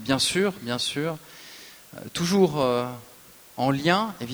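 From start to finish there's a steady, even hiss with no distortion: low bit depth with dither, about 8 bits, leaving noise only around 25 dB under the signal.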